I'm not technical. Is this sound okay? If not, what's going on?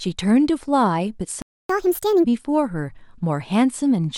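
No. At 1.42 s the speech cuts out and stays silent until 1.69 s, a gap of about 0.27 s. This is a playback stall: the audio simply stops mid-flow and then resumes. The likely cause is that the player briefly ran out of data to play, or was held up by something else on the device, so it had nothing to send to the speakers until it recovered.

Right after the gap, from 1.69 s to 2.24 s, the speech runs fast and high. This is catch-up at higher speed: the player plays the backed-up audio at 1.5 times normal speed to make up the lost time. Speeding it up this way also raises the pitch, by roughly seven semitones, so voices sound squeaky and hurried for about half a second before settling back to normal.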